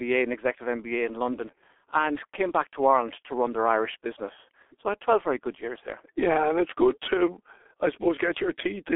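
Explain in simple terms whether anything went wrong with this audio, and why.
Something did go wrong, for the whole clip. The speech has passed through the G.723.1 codec, an old internet-phone format. It throws away everything above about 3.7 kHz and redraws the voice in coarse 30 ms chunks. So speech sounds muffled and hoarse, with smeared consonants.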